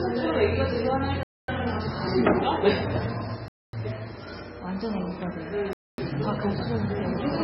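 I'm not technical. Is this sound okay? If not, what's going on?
No, there are three separate problems.

First, MP3 compression. The whole clip sounds dull and muffled, because nothing above about 5.6 kHz is left. Quiet details come and go, which gives a watery, swirly texture, and sharp starts sound smeared. This is likely heavy MP3 compression. When the encoder has too little room to store everything, it throws away the top end and any detail it considers less important.

Second, a gap between chunks. The sound stops dead three times, from 1.23 to 1.48 s, from 3.48 to 3.73 s, and from 5.73 to 5.98 s. Each hole lasts a quarter of a second. The holes repeat on a steady rhythm, which fits audio sent in two-second pieces with silence left at each join.

Third, a doubled audio track. From 6.46 s to the end, a second copy of the sound plays along about one second behind the original. It is somewhat quieter, with no fading tail or room sound, and it starts abruptly. 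The likely cause is the same audio being recorded twice through a slower path, or an edit that leaves two copies out of step.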